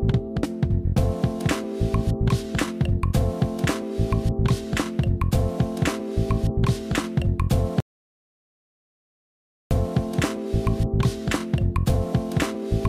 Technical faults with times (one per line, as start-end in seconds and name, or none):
7.80-9.71 audio dropout to silence